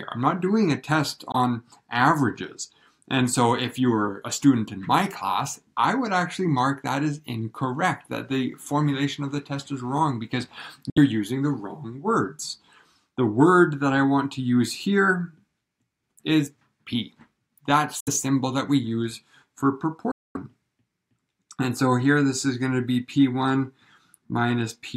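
Brief silent gaps cut the sound at 1.32 s, 10.90 s, 18.00 s and 20.11 to 20.37 s, resuming as if it had played on, likely Bluetooth dropouts from late, discarded packets.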